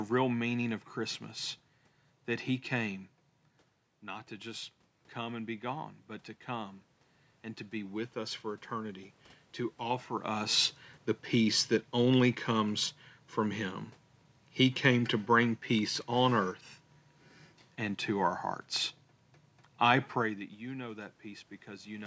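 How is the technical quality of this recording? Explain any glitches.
One glitch stands out in this speech recording. Automatic gain rising, from 4.01 to 10.39 s: after the talker moves away around 3.5 s, the input drops about 9 dB, and the gain control slowly adds about 6 dB, so voice and room noise swell together.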